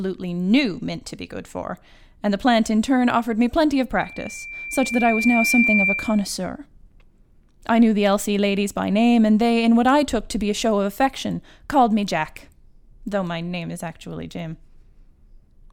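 At 4.01 s a loudspeaker feedback squeal begins in the speech and runs until 6.32 s. A microphone is picking up the loudspeaker it feeds. At 2.4 kHz the loop gain passes one, so that frequency reinforces itself on every trip around. It starts as a faint pure tone and swells over about a second and a half. It ends up as a piercing whistle roughly 5 dB louder than the speech, then stops at 6.32 s.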